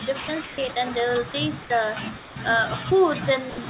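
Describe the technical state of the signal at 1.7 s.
Speech gives way to steady comfort noise from 1.62 to 1.70 s, just resuming at 1.7 s: sound dropped by the voice detector, which likely mistook quiet speech for background.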